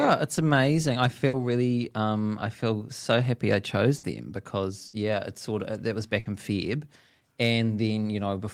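Bursts of packet loss occur at 1.27, 3.97, 4.87 and 6.19 s, each about 90 ms long. The receiver fills about 60 ms by stretching and fading the last speech, heard as a brief held buzz or hiss, then resumes with about 60 ms skipped.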